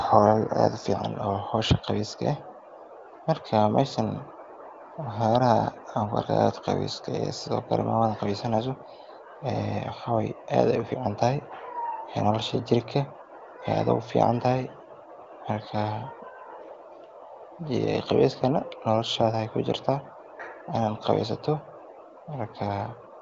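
No faults are audible; the speech sits in an AMR wideband (HD Voice) band with nothing above about 7.5 kHz, and what little codec colouring there is stays faint, which fits one of the codec's higher rates.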